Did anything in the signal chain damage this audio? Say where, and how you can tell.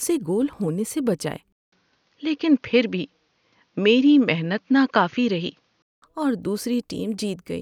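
Yes. From 1.52 s, just after "گول ہونے سے بچائے", a gap of 200 ms opens and the speech returns band-limited, with nothing above 6.7 kHz, a boxier tone, and a faint new noise floor well below the signal, at much the same level. At 6.02 s the full bandwidth comes back. This points to the driver or device stage: the input was likely switched to a poorer device and then back again.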